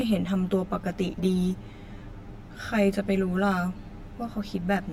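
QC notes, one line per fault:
Throughout: channel delay (comb filtering). The speech sounds hollow and phasey. Cancellations fall at fixed, evenly spaced frequencies, the lowest near 50 Hz and the rest roughly every 100 Hz above it. That spacing points to one channel running about 10 ms behind the other before the two are summed to mono. Content common to both channels cancels wherever the offset puts them out of phase.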